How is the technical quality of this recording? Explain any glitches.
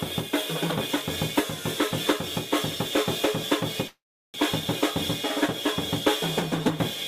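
There is one clear glitch in this music recording. From 3.87 to 4.36 s the music breaks into a brief fading buzz and then about 0.37 s of silence. It resumes exactly where it stopped, now running about 0.47 s late. This is likely a call audio freeze: delayed packets emptied the jitter buffer.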